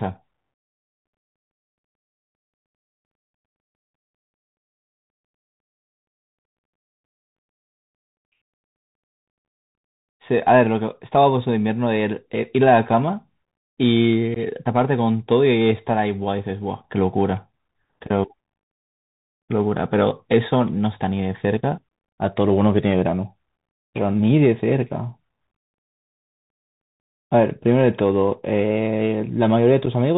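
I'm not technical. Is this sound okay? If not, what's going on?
No. The whole recording sounds muffled and phone-like, with scratchy s sounds and a grainy hiss under the speech. That is the Bluetooth CVSD headset codec, the basic wireless headset format, which drops everything above 4 kHz and struggles to follow sharp, bright sounds.

At 14.34 to 14.38 seconds and again at 29.86 seconds the speech briefly cuts out. This is unconcealed Bluetooth headset packet loss. Small chunks of sound never arrived from the headset, and nothing filled the gaps.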